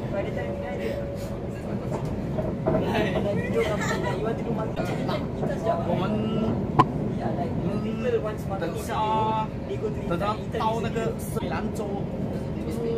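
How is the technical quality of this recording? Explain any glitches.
The recording has three audible glitches. Each is a brief break near 4.74 s, 6.78 s and 11.38 s, lasting about 44 ms. The sound jumps ahead and garbles briefly. This likely comes from a broken MP3 bit reservoir: frames went missing, so the following frames read borrowed data that wasn't theirs. The span is under two frames of roughly 26 ms.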